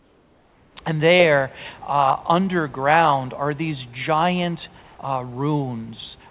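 Right from the start, 0 to 0.77 s, the room background gives way to comfort noise: a smooth, featureless hiss about 3 dB quieter than the real ambience. It happens again briefly from 4.82 to 4.97 s, only about 1 dB down. The likely cause is discontinuous transmission, where the sender goes quiet during pauses and the receiver fills the gap with synthetic noise, all heard through the call's narrowband path, with nothing above 4 kHz.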